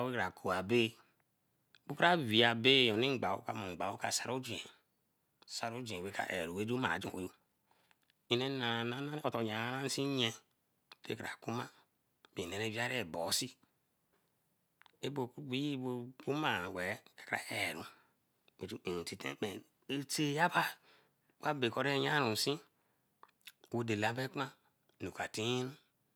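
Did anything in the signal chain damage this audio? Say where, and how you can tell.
Yes. From 6.74 to 9.48 s there is a time-stretched section: the pace jumps to about 1.42 times normal while the pitch stays where it was, and the passage sounds rushed before the original pace returns. The likely cause is software time compression applied to fit a target length, probably at the storage or editing stage. It holds pitch by discarding short slices of the waveform and splicing the remainder together, and that is what produces the hurried texture.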